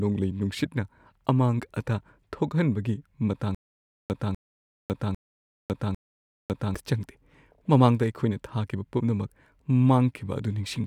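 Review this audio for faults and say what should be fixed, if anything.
From 3.55 to 6.75 s the speech breaks into a stutter with silent gaps: a 0.25 s fragment repeats four times, each followed by 0.55 s of digital silence, a steady 0.8 s cycle. The likely cause is a stalled stream replaying its last buffer on each retry, so the intervening speech is lost. Larger playback buffering with proper underrun handling would prevent it.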